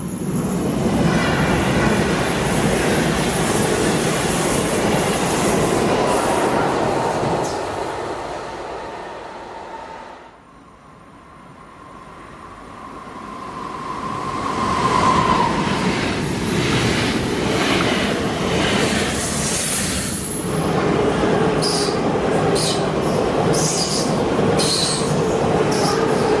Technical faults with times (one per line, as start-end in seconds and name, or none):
none